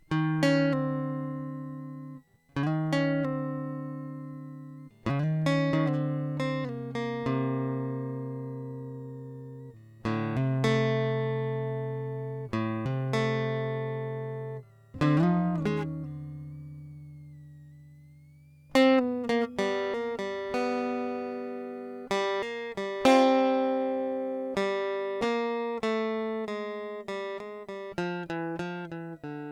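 A switching power supply in the chain is running in an audible burst mode or beating with another supply, laying a faint whistle around 2 kHz, wandering between 1.8 and 2.51 kHz, roughly 45 dB under the music throughout.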